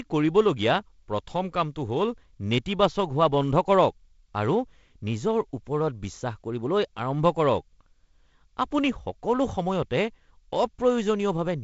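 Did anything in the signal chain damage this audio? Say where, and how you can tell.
No, nothing in this speech clip stood out as damage from any stage of the chain when I listened to it.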